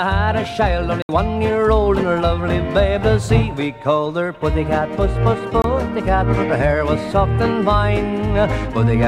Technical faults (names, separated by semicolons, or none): block of digital silence